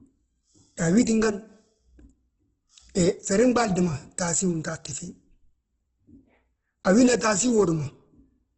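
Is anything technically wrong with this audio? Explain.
Yes. The whole clip carries heavy Opus compression damage, most likely from a low-rate encode. Nothing comes through above about 8.1 kHz, so the top end sounds cut off. Rather than swirling, the speech turns grainy and rough, with a noisy texture over the tones. That's the encoder keeping each band's energy but filling bands with folded or noise content when bits run short, which fits a very low bitrate, around 12 kbps.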